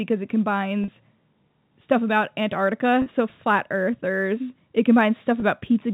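A speech clip carrying sample clock jitter throughout: a faint hiss and roughness, roughly 45 dB under the signal, that swells on loud, bright syllables and vanishes in pauses. On a spectrogram it shows as a low haze riding high-frequency energy, consistent with timing wobble of a microsecond or two. Three short gaps show packet loss with pitch repetition: 40 ms at 0.84 s, 40 ms at 3.02 s just after "so flat earthers it", and 20 ms at 5.40 s just before "so flat earthers it". Each sounds like a briefly held buzzy tone, drawn on a waveform as a few repeated pitch cycles fading out, suggesting two, two and one lost 20 ms packets. The G.711 telephone coding caps the spectrogram at 4 kHz.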